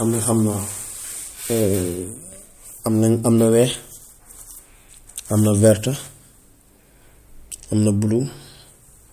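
No technical faults can be heard anywhere in the recording.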